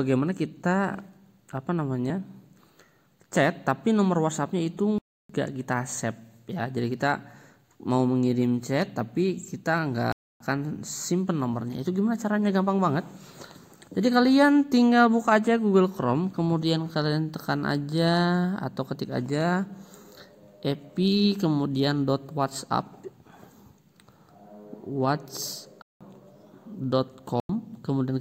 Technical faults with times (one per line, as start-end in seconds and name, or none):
4.98-5.29 block of digital silence
10.12-10.40 block of digital silence
25.82-26.01 block of digital silence
27.40-27.49 block of digital silence